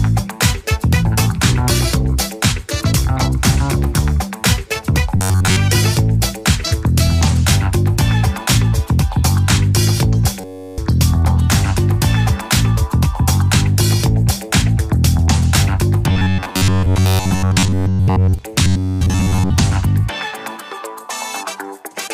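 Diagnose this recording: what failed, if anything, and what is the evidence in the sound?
Robotic sound from repeated short buffers at 5.17–5.56 s, 10.41–10.78 s, 16.10–18.39 s and 18.64–19.51 s: a rigid metallic buzz at 93.8 Hz. This is likely a driver or buffer underrun, with the last 10.7 ms looping while incoming audio is skipped.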